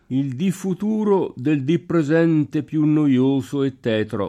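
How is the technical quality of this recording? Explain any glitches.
Nothing in the recording stands out as a glitch; it's technically sound all the way through, with no dropouts, clicks or other interruptions to explain.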